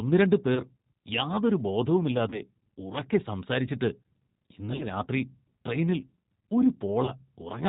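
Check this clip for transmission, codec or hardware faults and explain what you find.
Two faults are audible: G.729 coding across the whole speech clip, and four short dropouts concealed by the codec.

G.729 codec, throughout: The speech is rebuilt at a rate that fits 8 kbit/s G.729A, from a vocal tract filter, a pitch predictor and a few pulses per frame. Nothing above 4 kHz survives, so the sound is band-limited and plainly rough and synthetic.

VoIP packet loss concealed by the speech codec, at 0.55–0.63 s, 2.30–2.42 s (just before "ഉറക്കെ സംസാരിച്ചിട്ട്"), 4.76–4.86 s and 7.05–7.11 s: Packets went missing, and the decoder extrapolated from its last pitch and filter with falling gain. Each event is a brief buzzy or tonal smear that fades, and the speech recovers only gradually afterwards. The third event loses the most audio, about 40 ms against roughly 20 ms for the others.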